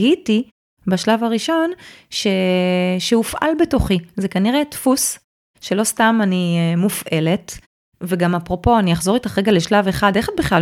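The speech signal shows no technical faults: no dropouts, glitches, distortion or timing problems can be heard anywhere in the clip.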